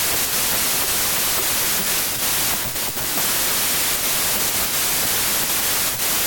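Throughout, a wrong sample width fault: packed 24-bit audio read as 32-bit samples, so most values mix bytes from neighbouring samples. Dense hiss buries speech running 1.33 times fast and high. A spectrogram shows flat noise over faint harmonics, and the waveform is a near-solid block.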